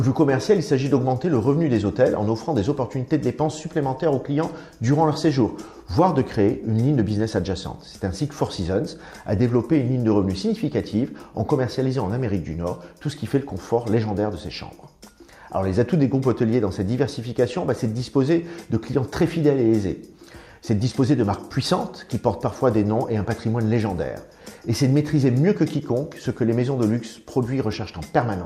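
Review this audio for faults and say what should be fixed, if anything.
Nothing here needs fixing: I listened all the way through and didn't catch anything that called for attention.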